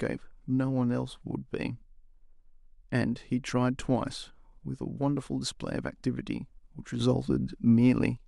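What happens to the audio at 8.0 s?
At 8.0 s the speech sits inside a stretch that runs from 7.00 to 8.17 s where everything is abruptly louder, by about 6 dB, with the background noise rising right along with the voice rather than the talker simply speaking up. This is a sudden gain jump, likely caused by a digital gain change applied from one sample to the next with no ramp, such as a level setting or bit shift switching instantly, then dropping back at 8.17 s.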